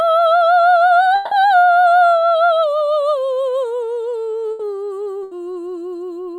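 At 1.15 s the stream most likely stopped delivering audio for a stretch, a long network dropout. The receiver stretches the last moment of music into a fading tone for about 160 ms until 1.34 s. The music then resumes with that section gone.

A burst of packet loss hits at 4.51 to 4.62 s and again at 5.23 to 5.34 s. Each time, about 80 ms of audio is missing and is replaced by the preceding sound held and turned down. The music then picks up further along.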